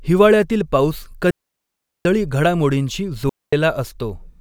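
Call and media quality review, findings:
Digital wireless dropout, two events. Wireless receiver losing too much data on the RF link, muting output with a very short fade. Speech drops to a clean hole of near silence, no noise burst on either side. First mute 1.31 to 2.05 s, about 743 ms. Second mute 3.29 to 3.53 s, about 233 ms. Gaps are abrupt-edged and quiet, pointing to receiver squelch on lost packets rather than analogue interference.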